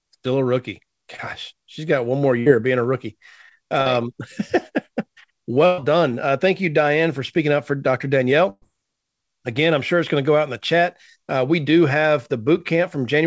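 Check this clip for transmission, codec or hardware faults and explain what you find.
Yes, there are transmission faults: two short concealed packet losses and three bursts of packet loss in this speech, carried over a call path whose audio stops at 8 kHz, which fits G.722 at 64 kbps.

Short concealed packet loss, at 1.16–1.20 s and 3.82–3.88 s: each is a brief smear or wobble where the sound seems to hang for an instant before blending back, and a quick consonant may drop out. About 20 ms and 40 ms of audio never arrived in time, and the receiver patched each hole by extending the preceding sound, following its pitch when voiced and using shaped noise otherwise, then crossfaded back into the real signal.

Burst of packet loss, at 2.40–2.48 s, 5.66–5.80 s and 8.50–8.64 s: these are longer. A voiced sound stretches into a held, buzzy tone and unvoiced sound into a dwindling hiss, and then the speech picks up further along, with a piece missing. 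Roughly 60 ms was lost in the first and 120 ms in each of the other two. The decoder kept extending the last sound while lowering its level. At 8.5 s that fade reaches about 20 ms of silence before the audio resumes.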